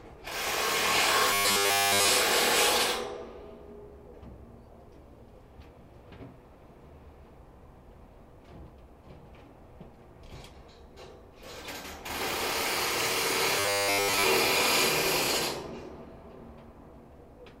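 Everyday sounds, with robotic sound from repeated short buffers in two spots. From 1.31 to 2.08 s, the audio turns into a rigid, metallic buzz at 100 Hz. The whole stretch is affected. From 13.60 to 14.25 s, the same 100 Hz buzz returns over most of the passage. The likely cause is audio arriving too late, so one 10 ms buffer is replayed again and again while the real sound is skipped.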